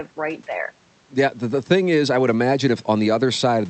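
Nothing stood out as a technical fault on listening to this speech recording.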